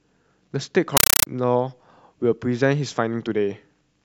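From 0.97 to 1.27 s, a compressed stream is played as audio: an AC-3 bitstream, consistent with 384 kbps Dolby Digital, is sent out undecoded as samples. The speech is replaced by loud, chattering static, with 8 ms noise bursts repeating 31.25 times a second between silent gaps.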